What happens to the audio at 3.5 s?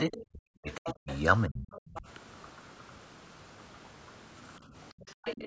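At 3.5 s the speech still carries the DC offset present throughout the clip: a constant shift pushes the whole waveform off the zero line. It isn't audible as such, but it eats into headroom and leaves steady energy at the very bottom of the spectrum.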